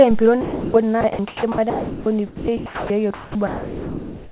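At 0.41 s the speech gives way to steady noise until 0.74 s. This is sound dropped by the voice detector. About 280 ms of speech is lost. The sender likely judged it to be background and stopped sending, so comfort noise fills the gap.

From 1.01 s to the end, the speech is chopped by the voice detector. Sending likely switches on and off repeatedly. About 2.26 s in total is replaced by comfort noise. The speech has two or more holes. Throughout, nothing is heard above 4 kHz, which fits a narrowband call codec.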